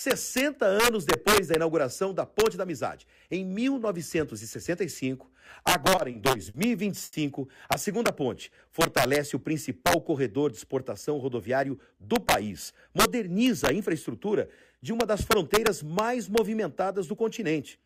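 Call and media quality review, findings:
Integer overflow, throughout: loud peaks crack violently. Gain stage wraps instead of limiting, driven about 3 dB over. A small fraction of samples are affected. The waveform shows peaks flipping rail-to-rail, and the spectrogram shows thin broadband vertical streaks.

Repeated stalls (stutter), 5.95–6.56 s: the audio drags. The jitter buffer underran four times, concealing 110 ms (longest gap 50 ms) with nothing lost. On the spectrogram, the last frame's content is smeared into flat horizontal bands.

Short stall from a late packet, 7.05–7.15 s: one sound is held too long. An 80 ms delay jump emptied the jitter buffer, which filled 80 ms. The waveform shows a looped, slightly dipping segment with no gap.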